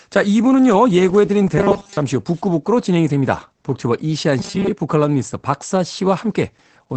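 Opus voice compression affects the whole speech clip. The SILK coder runs in wideband, with nothing above about 8.8 kHz, and its coarse excitation coding leaves the speech muffled, hoarse and faintly robotic. The damage is plainly audible and fits a bitrate near 12 kbps.

From 1.58 to 1.97 s the speech turns into robotic sound from repeated short buffers, a rigid metallic buzz at 200 Hz. A 5 ms stretch was likely replayed in place of incoming audio, so most of that span was skipped.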